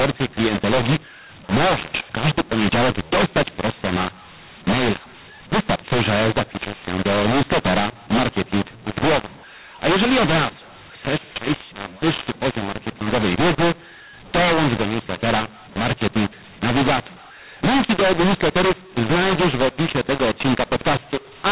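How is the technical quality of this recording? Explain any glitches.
The recording has one fault, present throughout: a mu-law and A-law mix-up. The speech was encoded as G.711 A-law, which on its own fits the band stopping at 4 kHz, but it was decoded as mu-law. That mismatch maps every sample to the wrong level, so loud and soft parts come out scrambled. The voice is harsh and gritty, and pauses fill with hiss. A waveform shows a jagged, uneven envelope, and a spectrogram shows broadband noise smeared below 4 kHz, including in the gaps.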